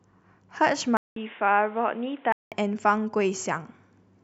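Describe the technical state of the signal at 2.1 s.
At 2.1 s the signal is in the middle of an input switched to a poorer device, which runs from 0.97 s to 2.52 s. The capture likely moved to a lesser microphone or a headset call profile. The switch opens with a gap of about 0.19 s of silence. After it, the speech is cut off above 3.8 kHz and sounds dull and boxy, with a new noise floor roughly 30 dB under the speech. The loudness stays about the same.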